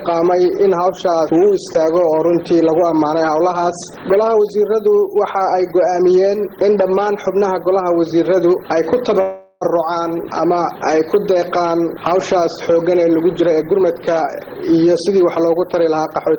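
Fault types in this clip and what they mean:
Call audio freeze: from 9.21 to 9.63 s the sound stalls and the last bit is stretched into a fading buzz or hiss for about 0.4 s. The likely cause is packets held up so the jitter buffer ran dry. Playback then resumes right where it left off, with nothing lost, just a gap inserted.
Jitter buffer speed-up: from 13.41 s almost to the end, the audio runs about 9% fast while keeping the same pitch. With more audio buffered than the receiver aims for, tiny pitch-period slices get snipped out one after another, trimming roughly 0.3 s and giving a hurried feel.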